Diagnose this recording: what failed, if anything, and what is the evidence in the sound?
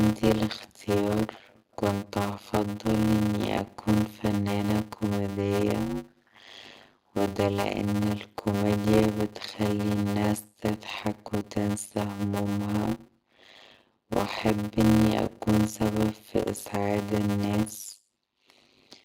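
A block size mismatch (padded) at the driver or buffer stage runs through the whole speech clip. One stage hands over shorter blocks than the next one reads, and the remainder of each block is zero-filled. That puts a short silent gap in every block, which is heard as a steady 100 Hz buzz. The speech also plays at 0.533 times normal speed. That fits 256-sample writes being read as blocks of about 480 samples.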